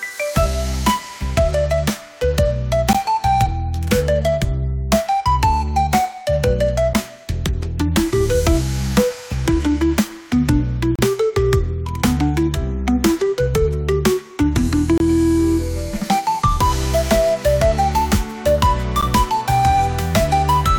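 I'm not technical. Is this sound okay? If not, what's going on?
No. There are brief silent dropouts at 2.93, 6.94, 10.96 to 10.99, 14.98 to 15.00 and 19.01 seconds. These are gaps between stream segments. The audio arrives in 4-second pieces whose timing doesn't quite line up, so the player fills each join with silence. Nothing is lost.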